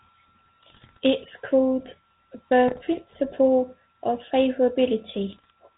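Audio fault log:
0.62–0.99 s, 2.68–2.82 s, 5.32–5.51 s: bit errors on an ADPCM link. Corrupted bits throw off the decoder's step size and prediction. Pops and rough bursts result, with brief level jumps.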